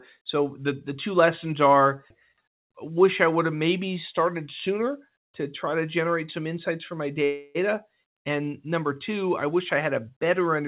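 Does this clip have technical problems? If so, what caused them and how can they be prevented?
Yes. A call audio freeze occurs from 7.24 to 7.57 s: the speech stops and its last sound is stretched into a fading buzz for about 0.31 s, never reaching silence. The speech then resumes exactly where it halted, so nothing is lost, but everything afterwards runs 0.31 s late. The likely cause is packets held up in the network, draining the jitter buffer so the receiver had to fill the gap. This band-limited G.711 call path carries nothing above 4 kHz. Prevention: give the audio stream network priority (QoS) and allow a slightly deeper adaptive jitter buffer.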